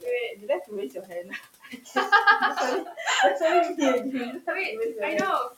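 At 0.35–0.49 s, 0.90–1.45 s, 1.62–1.96 s and 2.85–2.99 s, speech is cut by the noise suppressor, which mistakes quiet speech for the room noise sitting about 23 dB below it and pulls it down by about 9, 12, 14 and 11 dB. Syllable tails sound swallowed, up to a few tenths of a second each. A waveform shows abrupt envelope dips, and a spectrogram shows the faint upper harmonics and consonant energy thinning out.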